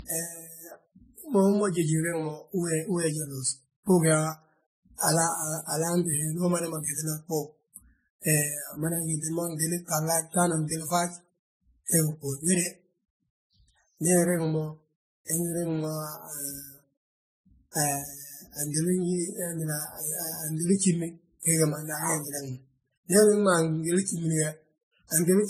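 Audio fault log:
Throughout: transcoding between lossy codecs. The speech carries two layers of compression artefacts at once, the artefacts of each codec heard together. Nothing sits above 14.6 kHz. This likely comes from a chain of encoders, consistent with a low-rate WMA pass at about 24 kbit/s followed by MP3 at around 51 kbit/s. The MP3 stage spent bits re-encoding the earlier damage, and the lower cut-off carried through.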